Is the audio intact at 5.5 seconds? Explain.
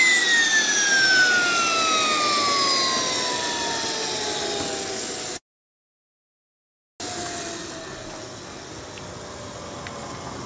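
No, 5.5 s falls inside a call audio freeze running from 5.37 to 7.02 s. The jitter buffer likely ran dry while packets were held up, so after a brief tail the sound goes silent. Playback then resumes where it stopped, about 1.6 s late, with nothing lost.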